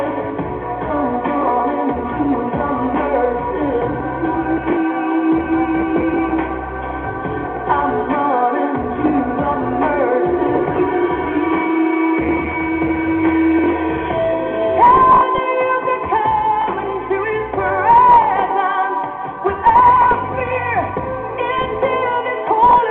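No technical faults can be heard in this recording.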